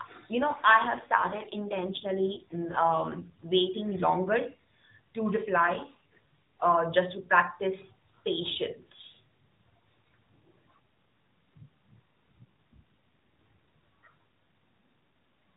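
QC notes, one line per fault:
0.34 to 3.30 s and 5.56 to 6.64 s, AMR rate drop: The narrowband mobile speech turns rougher and buzzier, then recovers before "waiting longer" and "just to practice patience". Band and continuity hold. The sound fits the codec falling from 12.2 to 5.9 kbps, with fewer bits left to model the voice.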